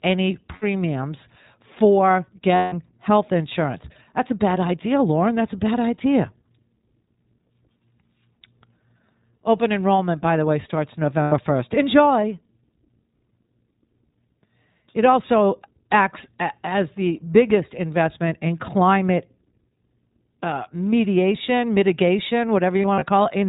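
The whole speech recording has passed through the iLBC codec, which fits its 15.2 kbps mode with 20 ms frames, so nothing above 4 kHz survives and voices come out plainly rough and synthetic-sounding. Lost iLBC frames also leave gaps the decoder covers by repeating the last pitch cycle with added noise, heard as brief held, buzzy vowels at 0.56–0.64 s (60 ms), 2.56–2.74 s (160 ms, fading) and 11.22–11.34 s (100 ms), and as short scattered dropouts of about 40 ms at most between 22.82 and 23.03 s.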